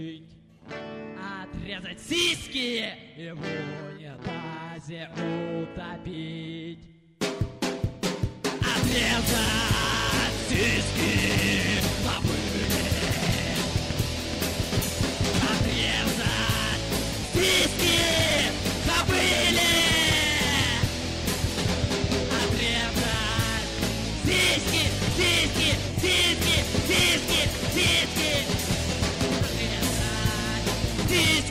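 From 10.63 s to 15.51 s a steady whine at 1 kHz sits around 30 dB below the sound: USB whine, as the bus's 1 ms frame current leaks in through power or ground. Unlike mains hum, its fixed pitch lies at 1 kHz, not 50 or 60 Hz.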